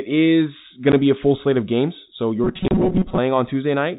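Speech, heard through a telephone-band channel. Nothing above 4 kHz comes through, which fits G.711 coding. There is packet loss filled with silence at 0.92 s, between "is going" and "to be a full". The gap is 10 ms, with hard edges. A second, longer hole runs from 2.68 to 2.71 s. At 30 ms, it fits three lost 10 ms packets replaced by silence. From 2.44 to 3.18 s the sound turns robotic. A rigid, metallic buzz at 188 Hz rides over it. The sound still follows the speech loosely. The likely cause is repeated short buffers. New audio arrived too seldom, so the last chunk of about 5.3 ms was replayed over and over. That repeat period sets the fixed buzz pitch. Roughly half the material in that stretch is repeats, and the real audio underneath is skipped.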